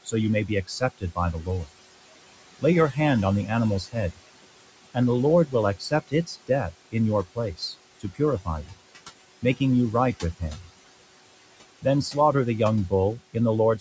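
Throughout the speech, a noise suppressor is cutting the room noise by about 21 dB, deciding band by band and frame by frame what counts as steady background. That noise, which sits about 14 dB under the voice, drains away in the pauses and comes back beneath each phrase. Nothing is heard above 8 kHz.

The same suppressor also misreads parts of the speech as noise and turns them down with the background. This speech cut by the noise suppressor hits from 0.48 to 1.69 s, just after "you may"; from 2.59 to 2.97 s, just before "on the"; from 3.46 to 4.19 s, right after "on the"; and from 5.46 to 6.95 s, 7.35 to 8.78 s and 11.82 to 12.15 s. Within each stretch, only brief pieces are dipped, adding up to between a tenth and nearly half a second. The deepest drops are about 17 to 22 dB, and only about 11 dB in the last. Consonants and word endings sound swallowed or suddenly faint.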